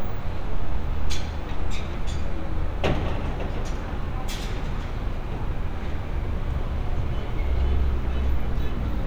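No technical faults can be heard anywhere in this sound recording.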